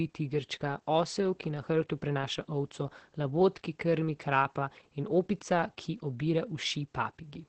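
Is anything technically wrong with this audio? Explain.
Yes. Opus voice compression runs through the whole speech clip, and it is heavy. Nothing remains above about 8.5 kHz, a wideband limit typical of the SILK linear-prediction coder. The excitation is coded so coarsely that the voice sounds muffled, hoarse and faintly robotic, which points to a bitrate near 10 kbps. A simple low-pass filter would dull the top without this grainy, synthetic buzz, and MP3-style damage would add swirly, metallic high-frequency artefacts.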